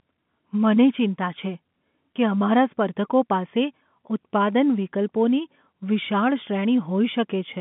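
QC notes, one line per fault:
No faults found; the speech is carried over G.711 telephone coding at 64 kbps, which limits it to the usual telephone band with nothing heard above about 3.7 kHz.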